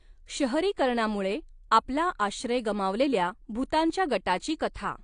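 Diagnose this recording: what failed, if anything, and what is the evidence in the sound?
The speech sounds dull and smeared for the whole clip, with a watery, warbling texture on sustained vowels and a fizzy, brittle edge on sibilants. There is no energy above about 9.8 kHz at any point. This is AAC compression at the codec stage, likely AAC-LC at a low bitrate that fits around 32 kbps. Short of bits, the encoder lowered its cut-off and quantised the remaining bands coarsely, leaving spectral holes that shift from frame to frame.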